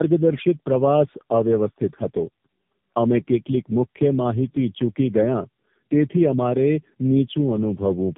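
Speech with tandem speech coding throughout: repeated low-rate narrowband coding, AMR-like, leaves it rough, muffled and warbly, and a spectrogram shows smeared harmonics and nothing above 3.5 kHz.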